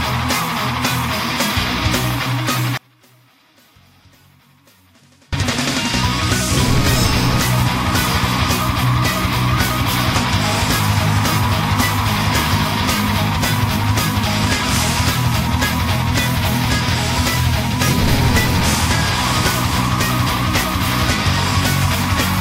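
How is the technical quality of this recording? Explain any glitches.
There is one clear fault. From 2.77 to 5.33 s the sound drops by about 32 dB, leaving a faint residue. The likely cause is one channel inverted: with one stereo side's polarity reversed, content shared by both channels cancels when summed to mono, so only their small difference survives.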